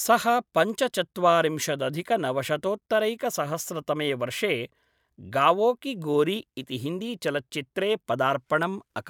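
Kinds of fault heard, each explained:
No kinds of fault are heard in this speech clip.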